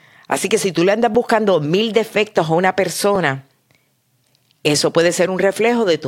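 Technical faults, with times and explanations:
1.15 s and 3.15 s, overlapping chunks: each 2.0 s chunk begins about 7 ms before the previous one ended, so that sliver of speech repeats, heard as a brief click at each join.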